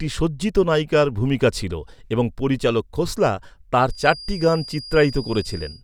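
From 3.84 s to the end of the speech, a feedback whistle creeps in: a thin, steady tone at 4.8 kHz sitting roughly 20 dB under the voice and swelling and fading slowly in level. It's most likely the speaker-to-mic loop hovering right at the edge of feedback, enough gain to keep that one frequency ringing but not enough to tip it into a full howl, so it just hangs there behind everything.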